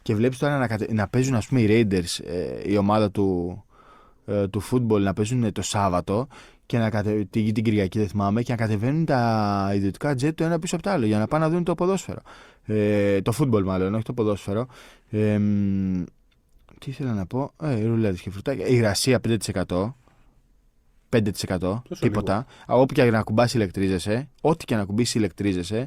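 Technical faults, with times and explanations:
No technical faults are audible anywhere in the speech recording, and the signal stays continuous for its full duration.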